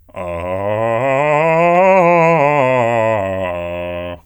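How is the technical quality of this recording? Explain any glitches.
No technical faults are audible anywhere in this music recording.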